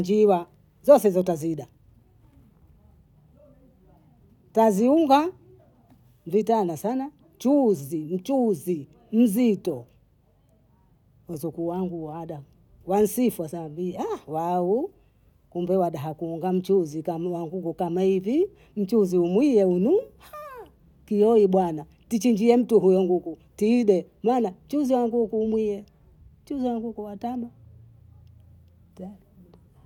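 No audible technical faults anywhere in the speech recording.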